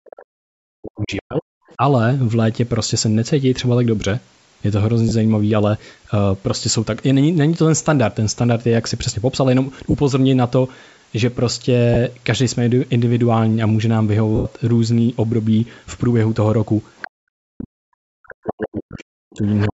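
From 0 to 1.81 s, speech is suppressed in double talk, likely because the echo canceller could not separate the talker from loudspeaker echo. The voice dips by as much as about 40 dB. Within that stretch, at 0.99 to 1.21 s and 1.68 to 1.75 s, the other side's voice leaks through faintly as scraps, about 20 and 30 dB below the speech.

Lost LE Audio frames follow at 5.09 to 5.11 s (20 ms), 9.91 to 9.94 s (30 ms), 11.94 to 11.96 s (20 ms) and 14.36 to 14.45 s (90 ms). The decoder refills each gap with a noisy smear, and the longest fades away.

At 16.97 to 17.08 s, leaked far-end voice returns about 15 dB down. From 17.17 s to the end, double-talk suppression again cuts the voice by up to about 40 dB. Leakage recurs at 18.31 to 18.83 s and 19.47 to 19.67 s.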